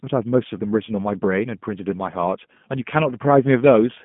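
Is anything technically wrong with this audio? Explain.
Yes. Throughout the speech there is G.729 codec damage. The codec rebuilds each 10 ms frame from a vocal tract filter, a pitch predictor and a few pulses, which fits an 8 kbit/s G.729A stream. Band-limited to 150 Hz to 3.4 kHz, the speech sounds plainly rough and synthetic.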